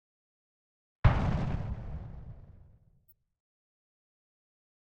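Flipped bits in compressed frames were decoded anyway (corrupt frame decoded), misplacing energy: a brief burst near -35 dBFS at 1.70–1.73 s, and a fainter one near -50 dBFS at 3.08–3.12 s.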